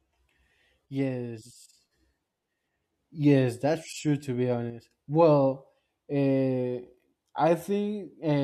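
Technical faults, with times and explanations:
0.86–1.85 s and 4.70–4.91 s, one channel drops out: the speech abruptly sinks by about 6 dB for roughly a second, then for a brief 0.21 s, before snapping back. The likely cause is one stereo channel going silent, so the mono sum carries only half the shared signal.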